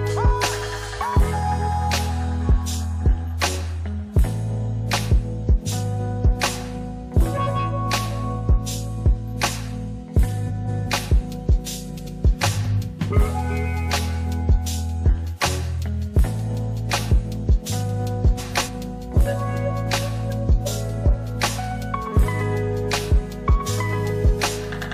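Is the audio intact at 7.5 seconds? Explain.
No, 7.5 s falls inside a frames-out-of-order glitch from 7.37 to 7.57 s. Two neighbouring blocks of about 93 ms each, which fits two-frame runs, play swapped, so you hear a garbled flutter, and no time is lost.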